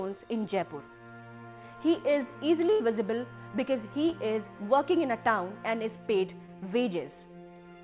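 At 2.72 s there's a burst of packet loss running to about 2.82 s. Roughly 80 ms of audio never arrived in time, so the receiver stretched the last sound into a fading buzz or hiss, then picked up further along with that stretch simply gone.

Then there are two bits of short concealed packet loss, at 4.10 s and 6.46 s, each about 20 ms. Here the receiver patched the tiny hole by continuing the previous sound and blending back in, which comes across as a quick smear or wobble. The whole thing sits in a band topping out around 4 kHz, which fits a narrowband G.711 mu-law call path.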